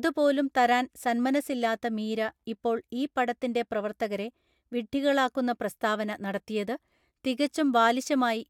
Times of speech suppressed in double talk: none

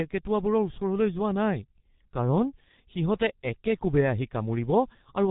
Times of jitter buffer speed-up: none

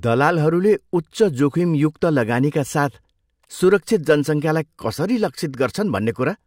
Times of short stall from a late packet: none

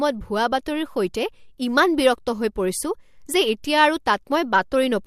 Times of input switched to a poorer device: none

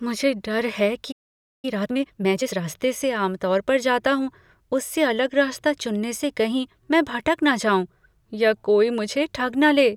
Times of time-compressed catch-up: 1.65-2.67

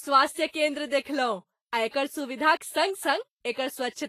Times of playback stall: none

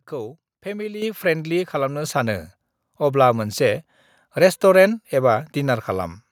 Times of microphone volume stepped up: 1.02, 2.04

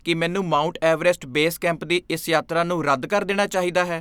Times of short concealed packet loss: none

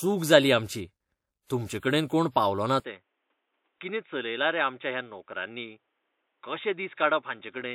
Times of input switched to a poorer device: 2.80-7.75

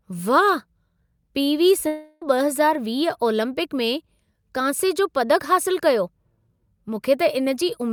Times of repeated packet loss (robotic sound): none

